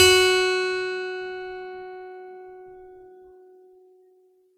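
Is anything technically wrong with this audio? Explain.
Yes, there's a problem running through the whole music clip: it has the swirly, hollow, smeared quality of generation loss. The likely cause is repeated lossy re-encoding, maybe fifteen or so passes, with a band-limit near 19.9 kHz that fits a 128 kbit/s MP3 chain. Each pass re-quantises on a shifted frame grid, so the noise and spectral holes pile up. It sounds worse than that bitrate alone should, and the attacks have gone soft and blurry.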